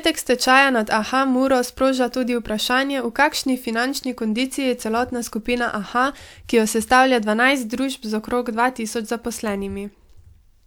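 Nothing in this recording trips any alarm, no dropouts, glitches or other technical hiccups along the way.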